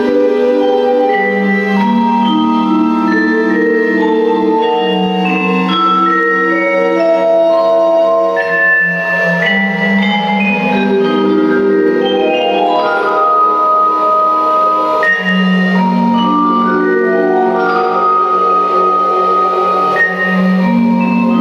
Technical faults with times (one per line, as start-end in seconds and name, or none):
0.00-21.40 gain pumping